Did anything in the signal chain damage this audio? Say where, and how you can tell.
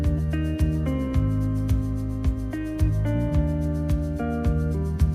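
No, nothing in the signal chain has audibly damaged this audio, and no stage from capture through playback leaves a mark that can be heard or pinned to a moment in the signal.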